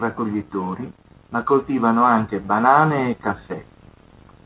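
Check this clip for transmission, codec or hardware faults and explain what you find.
There's one fault in here: an automatic gain rise partway through the speech. From about 1.47 s to 3.28 s the level creeps up by roughly 4 dB. The automatic gain control decided the input was running too quiet and nudged its gain upward over nearly two seconds. Since it's scaling the whole signal, the voice and the background noise swell together, so you hear the room lift along with the talker rather than just the speech getting louder. The call path itself, with nothing above 4 kHz, sounds like narrowband telephone audio, which points to G.711 mu-law at 64 kbps.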